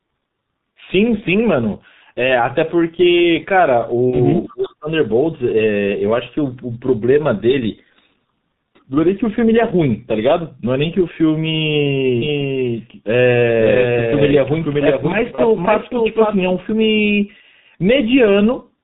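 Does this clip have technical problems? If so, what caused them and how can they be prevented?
Yes. The whole recording carries G.723.1 codec damage, heavy at about 6.3 kbit/s. Nothing above 4 kHz survives. The slow model updates leave the speech muffled and hoarse, with smeared consonants. A wideband codec at a higher bitrate would prevent this.

VoIP packet loss concealed by the speech codec appears twice: 4.10 to 4.18 s and 15.35 to 15.41 s. Each gap is 30 ms, which fits one lost frame. The decoder stretches its last pitch and filter into a fading buzz or coloured noise. A jitter buffer with forward error correction would reduce this.

Speech is suppressed in double talk from 4.46 to 4.89 s. The level drops by roughly 35 dB at worst, over about 400 ms. The likely cause is an echo canceller ducking while both sides speak. A canceller with better double-talk detection would prevent it.

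An echo leak runs from 4.48 to 4.73 s. A faint copy of the speech returns 343 ms late, about 25 dB below the main level. It likely comes from a loudspeaker whose echo canceller did not remove all of it. A headset, or better echo cancellation, would prevent it.

A doubled audio track runs from 12.22 to 16.54 s. A full-band copy trails by roughly half a second, about 5 dB quieter. It has no room colour, and it starts and stops abruptly. It likely comes from a second capture path or a misaligned edit. Monitoring a single source would prevent it.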